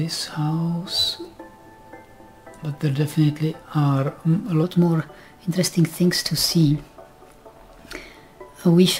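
A section at the wrong speed begins at 4.63 s and runs to the end of the clip. From that point the audio plays 1.13 times faster than it was recorded, so time and pitch shift together, with everything rising by about two semitones and moving more quickly. The change is abrupt rather than gradual, pointing to a likely playback or editing step that applied the wrong clock rate to this second part only.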